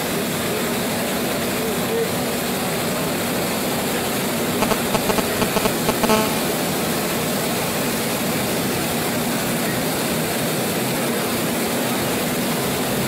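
GSM signalling bursts run from 4.62 to 6.05 s: a galloping dit-dit-dit of short 217 Hz buzzes, about 5 dB louder than the sound itself. A nearby 2G phone is sending brief groups of radio bursts, and the audio circuitry rectifies them into buzz.

GSM phone buzz follows at once, from 6.10 to 8.70 s, as a steady, hard, raspy 217 Hz buzz rich in harmonics, about 6 dB below the sound. The phone has moved into a call, pulsing continuously 217 times a second, and the circuitry rectifies every burst.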